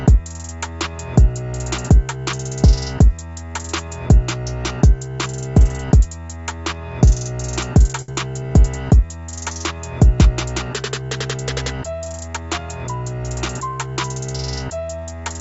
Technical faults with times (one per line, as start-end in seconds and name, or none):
8.02-8.10 short stall from a late packet
8.12-8.18 short concealed packet loss
12.05-12.38 jitter buffer speed-up